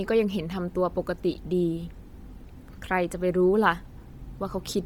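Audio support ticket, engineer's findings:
Speech, whole clip: likely Bluetooth LC3 compression, fitting roughly 32 kbps with 10 ms frames. Encoder starves the upper spectrum, zeroing bands and filling them with noise. Result: heavy breathy, grainy edge on the voice. Nothing above 20.2 kHz.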